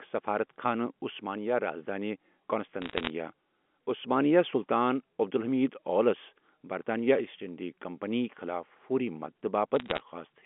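A burst of sharp ticks and crackle sits over the speech from 2.82 to 3.1 s, and a second, slightly sparser burst returns from 9.76 to 10.0 s. These are bit errors on a digital phone line. Somewhere under one percent of the bits on the G.711 A-law link were flipped. Each flip corrupts a single sample, and a flip hitting an upper bit or the sign of a loud sample throws that sample far off, producing an isolated click.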